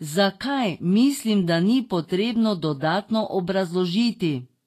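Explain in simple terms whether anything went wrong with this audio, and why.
The speech was squeezed hard by a compression codec, most likely Vorbis at a low quality setting. To save space, the codec threw away everything above 14.1 kHz and stored the remaining high frequencies only roughly, replacing their fine detail with noise of similar strength. The result is plainly audible throughout all of the roughly 5-second clip: the speech sounds dull at the top yet hissy and grainy, with edges of sounds blurred rather than crisp.

There is also a pre-echo at 2.80 s, just after "mislim da ni potrebno". The codec handles sound in short blocks and spreads its coding noise evenly across each one. Here a sudden sharp sound came late in a block, so the noise meant for that loud moment leaked into the quiet instant just before it. You hear a brief hiss, about 20 ms long, arriving ahead of the sound, which itself comes across softened and smeared.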